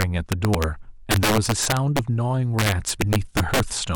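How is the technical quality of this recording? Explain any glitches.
The speech has two faults. There is integer overflow throughout. Loud peaks run about 6 dB past the integer limit and wrap to the opposite sign, causing harsh cracks on a small share of samples. Compressed frames are skipped at 0.54 s. About two frames, roughly 50 ms of audio, are lost, which fits frames of about 23 ms. The speech jumps ahead at that point.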